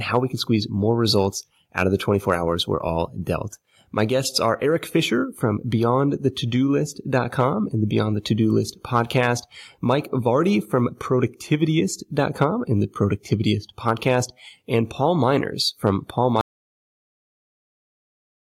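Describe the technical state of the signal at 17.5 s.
At 17.5 s you're in an audio dropout to silence: from 16.41 s to the end it's dead silence, no room tone, likely a lost input with the recorder still writing.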